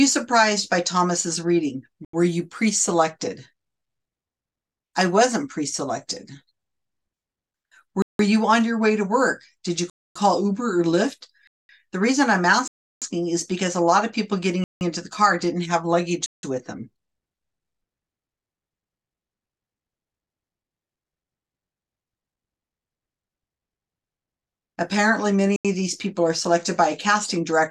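The program likely failed repeatedly to fill its output buffer in time, so whole blocks of samples came out as zeros: a block of digital silence at 2.05 s (85 ms), 8.02 s (171 ms), 9.90 s (256 ms), 11.47 s (218 ms), 12.68 s (341 ms), 14.64 s (171 ms), 16.26 s (171 ms) and 25.56 s (85 ms). Most of the lengths fit whole buffers of roughly 4096 to 16384 samples at 48 kHz. Each dropout starts and ends abruptly, leaving a clear hole in the sound.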